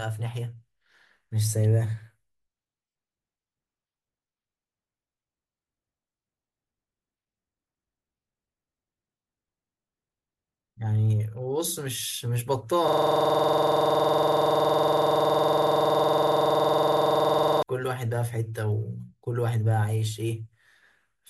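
From 12.88 s to 17.63 s the speech gives way to a hard, rapid stutter: one 46 ms fragment repeats exactly, about a hundred times, producing a rattling buzz near 21.5 Hz. This is a system hang loop. The computer or audio driver stalled, and the sound hardware kept replaying the last filled section of its ring buffer. A loop of this length fits a 2048-sample buffer.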